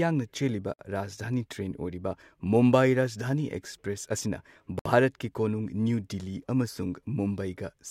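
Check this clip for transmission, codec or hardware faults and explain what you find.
Two faults of one kind appear in the speech. Gaps at joins of encoded pieces occur at 0.74 to 0.79 s (55 ms) and 4.79 to 4.86 s (64 ms), about 4 s apart. Separately encoded pieces kept their start delay and end padding, so the speech abruptly drops out and then resumes where it stopped. The waveform flatlines and the spectrogram shows a narrow blank vertical column with slightly smeared edges.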